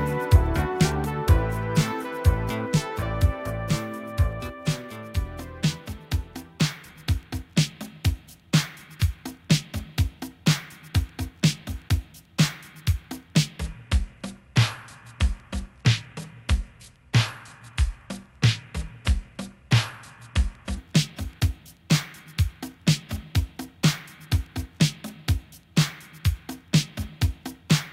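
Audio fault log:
13.60–20.78 s, section at the wrong speed: plays at 0.75x, slow and roughly five semitones deeper, likely from a clock mismatch; spectrogram harmonics drop and stretch out in time.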